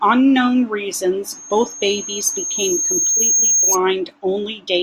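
A speech recording carries loudspeaker feedback squeal from 1.29 to 3.79 s: a single 6.5 kHz tone swells over about two seconds to roughly 5 dB above the speech, because the microphone is re-amplifying its own loudspeaker. A spectrogram shows one brightening horizontal line, and the waveform's envelope thickens.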